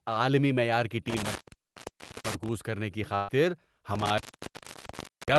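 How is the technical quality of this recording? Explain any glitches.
The recording has real problems: two stretches where the signal drops out from a bad connection, and one short packet-loss glitch. Underneath it all, the speech has passed through a call codec whose top end stops around 12 kHz, which fits Opus at a modest bitrate.

Intermittent contact: From 1.08 to 2.52 s, right after "عالمی معیار کی" and before "کرنے کی", a loose cable or plug breaks contact and the line is open for about 0.9 s. The same thing happens again from 3.95 s to the end, with the line open for about 1.1 s. Each time the speech cuts out with crackle at the edges, and faint hiss fills the gap while the connection is broken.

Burst of packet loss: Just after "کرنے کی", from 3.15 to 3.30 s, a run of packets either never arrived or arrived too late. The receiver papered over the hole by stretching the last sound for about 128 ms, fading it down as it went. 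That comes across as a brief held buzz or fading hiss. Then the speech jumps ahead, and about 120 ms of real audio is simply gone.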